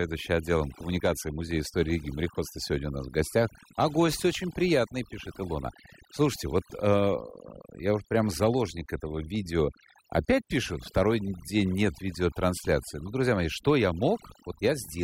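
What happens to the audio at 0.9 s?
Overdone noise removal runs through the whole clip, so at 0.9 s it is already suppressing quiet bands, leaving a lowered background broken into twinkling, warbling specks.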